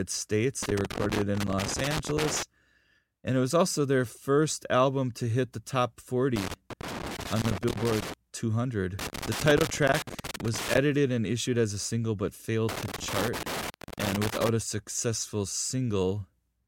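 From 0.63 to 2.43 s there's loose connector crackle, that irregular scratchy burst you get when a worn or dirty contact keeps making and breaking as it shifts. The signal gets chopped on and off, and any DC on the line snaps in as pops. It comes back right after "to hit the top" (6.36 to 8.14 s), again from 8.99 to 10.78 s just before "and issued as a", and once more from 12.69 to 14.49 s, between "as a single but" and "a successful".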